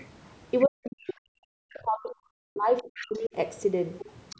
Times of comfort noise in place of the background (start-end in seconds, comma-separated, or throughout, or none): none